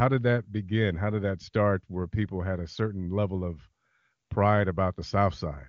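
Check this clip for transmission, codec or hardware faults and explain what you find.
Nothing to report: the speech passes through the AMR wideband (HD Voice) path with at most faint coding damage, consistent with one of its highest bitrates.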